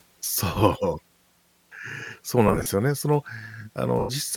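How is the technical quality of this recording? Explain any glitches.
The recording has two dropouts from lost LE Audio frames, at 2.48–2.66 s and 3.99–4.10 s. About 100 ms went missing each time, in short bursts under roughly 30 ms for the first. The LC3 decoder filled the gaps with recycled, sign-scrambled spectrum, so the sound briefly smears into noise.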